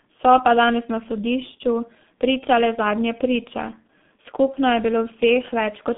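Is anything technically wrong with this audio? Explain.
Yes. G.723.1 codec, throughout: the sound passes a narrow telephone band of about 150 Hz to 3.6 kHz, with nothing above 3.7 kHz. Its coarse, slowly updated voice model, consistent with a rate near 6.3 kbit/s, leaves heavy damage, with muffled, hoarse speech and smeared consonants.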